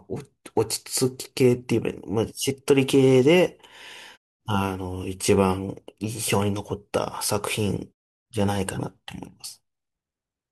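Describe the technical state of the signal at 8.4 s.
At 8.4 s the signal is intact, with no fault audible in the speech at that moment.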